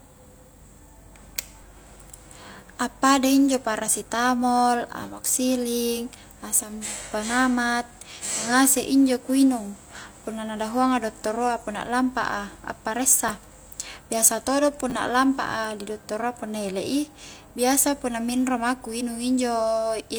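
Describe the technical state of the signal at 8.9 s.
At 8.9 s the speech signal is intact, with no audible fault at that moment.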